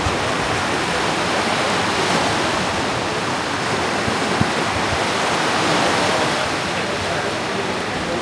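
No technical faults can be heard anywhere in the recording; the signal stays stable and intact throughout.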